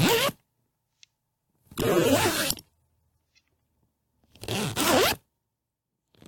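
At 1.76 s the audio drops abruptly to a lower-bitrate rendition of the adaptive stream and stays there until 3.76 s, a two-second stretch. The switch is instant with no gap: codec artefacts rise. The degradation points to the player falling back from roughly 96 kbit/s to about 32 kbit/s AAC after a throughput dip, then recovering.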